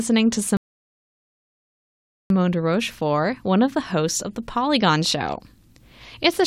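At 0.57 s the speech hits a rebuffering stall: the player ran dry, went silent until 2.30 s, then picked up exactly where it stopped, adding 1.73 s.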